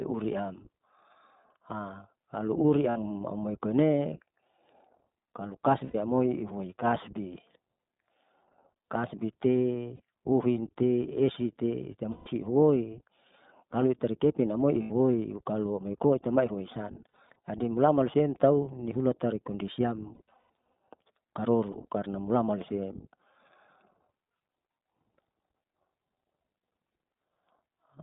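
Throughout, the speech carries the iLBC codec's narrowband, slightly rough, synthetic texture at a rate of about 15.2 kbps. On a spectrogram, energy sits between 150 Hz and 3.7 kHz with nothing above, and the damage is plainly audible in 20 ms frames.

Lost iLBC frames occur at 2.90–2.98, 5.84–5.95, 9.96–10.00, 12.12–12.28, 14.82–14.92, 17.12–17.36 (scattered, longest run about 70 ms), 20.14–20.73 (scattered, longest about 100 ms) and 21.72–21.77 s. Each gap becomes a held, buzzy vowel with flat, repeating harmonics that fade over the longer losses, and the voice is right again almost at once after.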